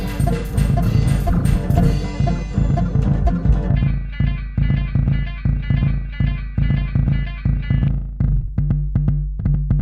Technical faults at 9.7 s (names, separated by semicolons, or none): none